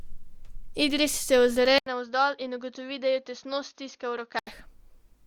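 Speech that abruptly turns dull and boxy at 1.78 s, after a gap of about 80 ms, and stays that way until 4.47 s, when the fuller sound returns. The likely cause is an input switched to a poorer device partway through the recording. During that stretch nothing is present above 6.6 kHz, the level falls by roughly 10 dB, and a faint new noise floor appears, around 45 dB below the speech. On a spectrogram the band above 6.6 kHz goes empty from 1.78 to 4.47 s, with a thin vertical blank at the switch. The waveform shows a brief flat gap followed by a visibly smaller envelope.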